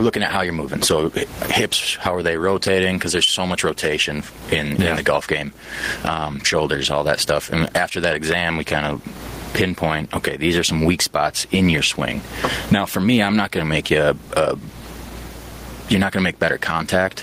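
Speech with gain pumping throughout: the room noise sits about 37 dB below the speech, and the gain swings by roughly 25 dB. The likely cause is input gain set far too high, with a fast limiter squashing the peaks.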